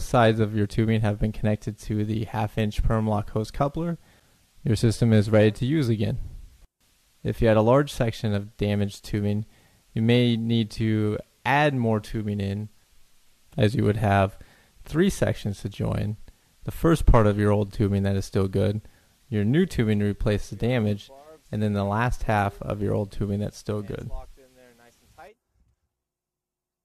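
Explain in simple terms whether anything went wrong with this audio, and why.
Nothing went wrong here: the recording runs without any technical fault at any point, so there's nothing to fix.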